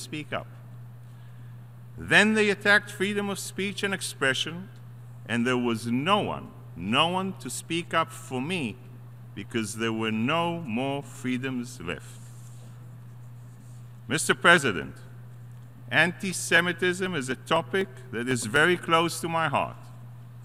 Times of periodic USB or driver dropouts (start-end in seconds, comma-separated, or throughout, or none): 14.57-18.56